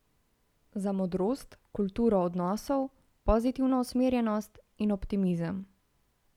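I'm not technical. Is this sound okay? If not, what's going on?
No. From 3.70 to 4.81 s the speech suddenly runs 5.4% fast and sits almost a semitone higher, then snaps back. This is a drift correction step. Software keeping two clocks in step likely sped up playback briefly to balance its buffer.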